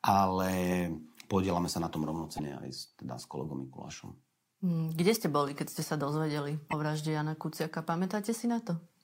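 A likely broken MP3 bit reservoir: after frames were lost from the stream, the next frame reached back into the reservoir for data it had stored in earlier frames and found bytes belonging to a different frame. The speech skips forward and a short corrupted stretch about one 26.1 ms frame long replaces it, heard at 2.37 to 2.40 s and again at 6.70 to 6.73 s as a brief glitch in the speech.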